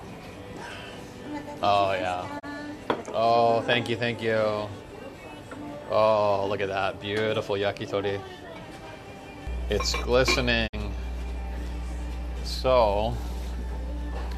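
At 2.38 s the sound fades out over about 20 ms and drops into a brief silent gap until 2.45 s, then returns with that stretch of programme missing. This is a digital broadcast dropout. The receiver muted when a frame failed, and the gap fits a single lost frame of about 24 ms. From 9.47 s to the end, a steady low 60 Hz mains hum sits nearly as loud as the programme itself, from power-line coupling such as a ground loop or a nearby transformer. Under that hum, a second dropout at 10.66 to 10.75 s fades and mutes again for longer, consistent with two lost frames of about 48 ms.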